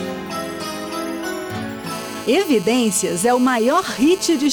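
From 1.91 s to 4.47 s a GSM phone buzz sits under the audio: a hard, raspy tone at about 217 Hz, steady throughout, as a nearby 2G handset on a call pulses its transmitter and the audio circuit rectifies those bursts. It runs about 15 dB below the signal. A spectrogram shows a comb of evenly spaced harmonic lines stacked up from 217 Hz, unrelated to the content, and the waveform carries a fine, regular pulse train.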